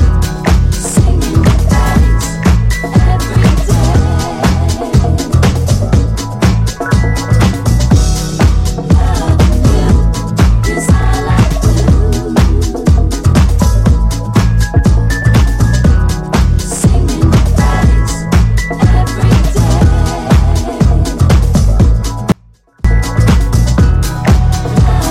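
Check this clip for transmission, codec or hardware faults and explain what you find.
One fault is present: an audio dropout to a faint residue from 22.32 to 22.85 s, about 0.53 s. The sound cuts out abruptly and only a faint trace remains, roughly 35 dB down, most likely because the signal was lost while the downstream path stayed live. The hard edges at both ends separate it from a pause or fade.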